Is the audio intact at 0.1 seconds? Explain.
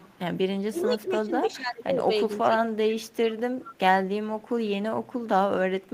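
No, there's an echo leak from 0.0 to 0.19 s: a faint copy of the speech trailing about 430 ms behind, sitting well below the main signal. The likely cause is a far-end speakerphone whose echo canceller let some of its own playback slip back.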